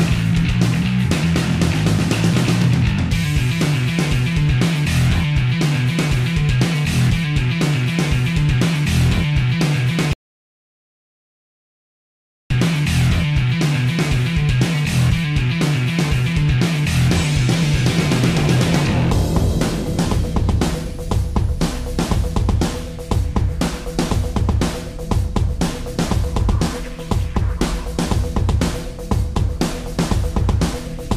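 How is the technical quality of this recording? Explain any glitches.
There is one glitch: an audio dropout to silence from 10.13 s to 12.50 s. The sound cuts off mid-flow and about 2.37 s of audio is lost. The gap is silent with no room tone, likely because the input signal was interrupted while the recorder kept writing zeros.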